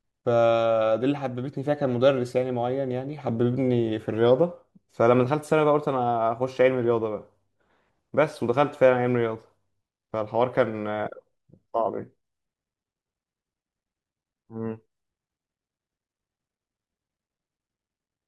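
Speech recording with no audible technical faults anywhere.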